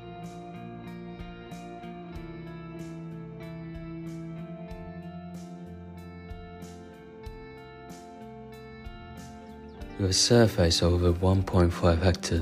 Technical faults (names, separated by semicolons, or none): none